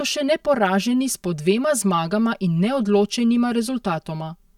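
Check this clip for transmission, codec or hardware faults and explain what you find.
One fault runs through the whole speech clip. Channel delay (comb filtering), throughout: one channel lags by around 5 ms before mono summing, cancelling evenly spaced frequencies from around 100 Hz, so the speech sounds hollow and phasey.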